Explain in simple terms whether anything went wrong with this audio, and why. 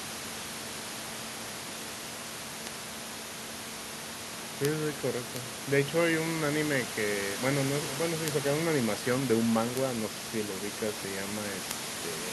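Bit error spikes at 2.67, 4.65, 5.36, 8.28, 9.77 and 11.71 s: a single flipped digital bit briefly throws a sample far off, causing a sharp tick unrelated to the speech.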